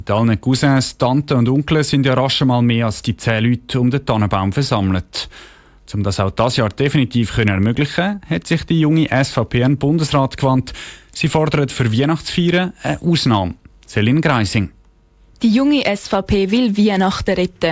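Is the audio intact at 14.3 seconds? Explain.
Yes, the audio is intact at 14.3 seconds, with the speech running on without any audible dropout, click or distortion at that point.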